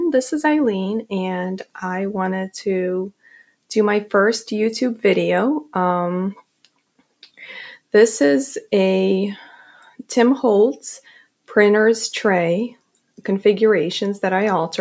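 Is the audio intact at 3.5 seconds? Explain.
No, at 3.5 s you're inside a stretch where the sound gets cut by the noise suppressor, running from about 3.1 to 3.55 s. It mistook the sound for noise and pulled it down by up to about 17 dB, so it sinks in level for roughly a third of a second.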